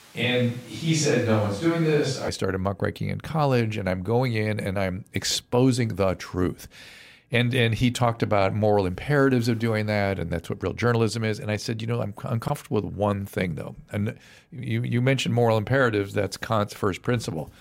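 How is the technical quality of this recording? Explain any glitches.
Two glitches stand out in this speech recording: a distant-sounding opening and a brief scrambled moment later on.

From the very start until about 2.29 s, just before "started muckraking in college", the voice sounds roomy and hollow, thin in the bass, with room noise only about 25 dB below the speech, though the level barely changes. It then snaps abruptly to a closer, fuller sound. This is likely a switch to a distant microphone, with a far-off mic such as a camera's standing in for the close one.

Between 12.46 and 12.50 s, after "said you know I'm" and before "with one thing though", there's a quick jumbled flicker. This is chunks out of order: a 20 ms piece of audio arrived one chunk late and played after the piece that should follow it. Nothing is missing, but swapping the two pieces creates three hard joins.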